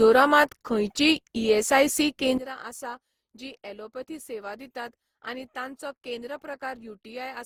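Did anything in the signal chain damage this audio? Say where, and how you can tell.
Yes. Generation loss runs through the whole speech clip and points to the codec stage. The sound is swirly, smeared and hollow, and consonant attacks blur, more than a single Opus pass at 48 kbit/s would explain. Content still reaches 20.3 kHz, so this is not band-limiting. The likely cause is repeated decoding and re-encoding, around seven passes. Each pass quantises on a shifted frame grid, so the noise piles up.

A sudden gain jump hits at 2.38 s, when the level drops by about 16 dB and stays down until the end of the clip. The speech and the background noise fall together, within a sample, with no fade. That points to a digital gain stage rather than the source or the room. The likely cause is a gain setting or bit shift applied in the chain without a ramp.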